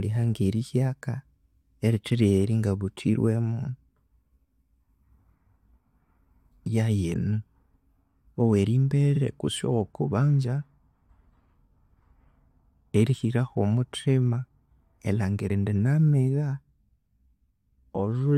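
At 9.15 s, just before "kutse owokubanza", the speech stutters. Repeated frames replay a 46.4 ms block once, which fits two compressed frames sent twice, adding 46.4 ms. The waveform shows an identical slice back to back.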